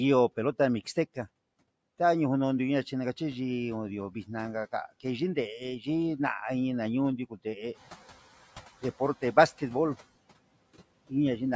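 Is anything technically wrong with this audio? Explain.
Yes. Throughout, the noise suppressor lowers the bands it treats as steady noise by about 18 dB, so noise artifacts remain: the background dips between phrases and rises under the speech.

From 7.29 to 7.58 s, the noise suppressor cut speech: it mistook parts of the speech for noise and pulled them down by up to about 19 dB for roughly a tenth of a second, leaving them faint and swallowed. This falls as the room noise rises by about 12 dB near 7.5 s.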